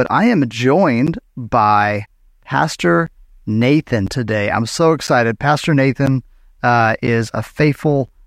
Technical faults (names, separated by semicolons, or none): periodic USB or driver dropouts